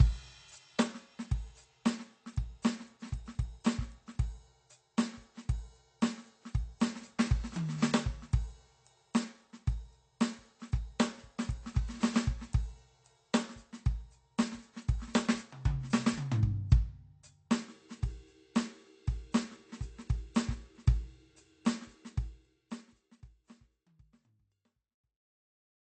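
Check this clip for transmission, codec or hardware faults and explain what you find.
One codec fault is present across the whole music clip, with AAC compression the likely cause. Nothing is heard above 8.7 kHz, and the content below is coarsely quantised, which fits a bitrate near 32 kbps. The result is dull, smeared and plainly damaged. The level fade from about 22 s to 25.8 s is a smooth editorial fade-out, not a fault.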